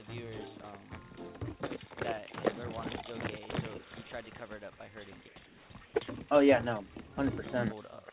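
Between 5.28 and 5.36 s, 5.46 and 5.70 s, and 5.86 and 5.94 s, the real background gives way to comfort noise, likely from discontinuous transmission, and drops about 5, 2 and 1 dB. On a spectrogram these gaps show as smooth, featureless noise below 4 kHz, and the waveform shows a flat, even band.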